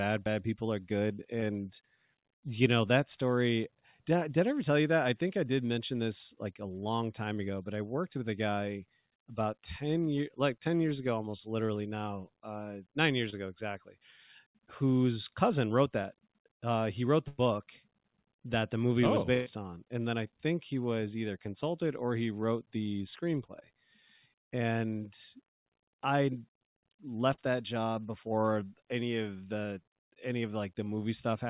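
At 13.30 s a brief smear of about 20 ms interrupts the speech. This is short concealed packet loss: the audio reached the decoder too late, so the receiver extended the last sound to bridge the gap. At 17.28 s the sound is drawn out and fades for about 100 ms before jumping ahead, and at 19.34 s the same happens for about 120 ms. These are bursts of packet loss: several packets in a row were lost, the receiver stretched and attenuated the last sound across the gap, and the speech in between is gone. Further short concealed losses bring a quick smear at 23.60 s and a longer smear of about 40 ms at 27.33 s, both heard over the narrowband G.711 mu-law call path, which carries nothing above 4 kHz.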